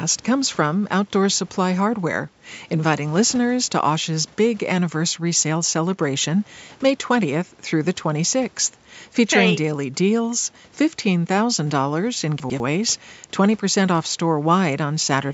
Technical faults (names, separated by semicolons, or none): chunks out of order